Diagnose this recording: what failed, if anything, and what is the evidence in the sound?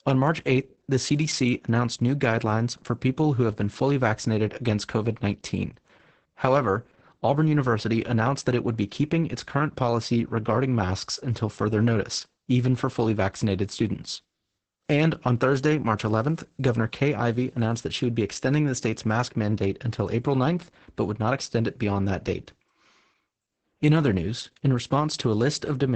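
The codec stage failed: this is heavy Opus voice compression throughout. Speech sounds muffled, hoarse and a bit robotic, with nothing above about 8.7 kHz. That points to SILK running wideband at a starved bitrate, roughly 10 kbps, coding the excitation too coarsely.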